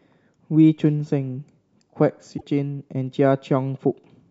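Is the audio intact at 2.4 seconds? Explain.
No. Part of the compressed speech stream is corrupted from 2.34 to 2.43 s, a damaged data fault. The decoder misreads those frames, loses sync and hunts for the next valid frame header, so the speech breaks into a brief chirp, squawk, click or short hole.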